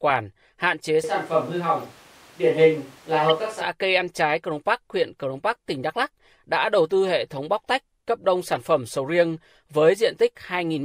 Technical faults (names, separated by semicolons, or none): switch to a distant microphone; corrupt frame decoded